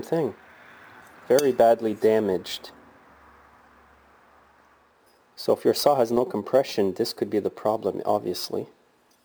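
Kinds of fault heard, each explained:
Imaging from sample-and-hold upsampling: unsmoothed repeated samples mirror into a metallic 11 to 22 kHz fizz about 24 dB down; unlike hiss, it follows loudness and runs against pitch.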